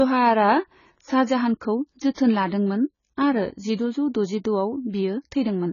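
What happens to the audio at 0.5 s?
At 0.5 s the speech carries the same damage heard through the whole clip, likely from AAC compression. Nothing sounds above 7 kHz, so the sound is dull and closed in. The encoder has too few bits to spend on the spectrum. It drops the highest bands and quantises the rest coarsely, leaving gaps. Sibilants turn fizzy and sustained sounds warble. The heavy damage fits a very low bitrate, around 16 kbps.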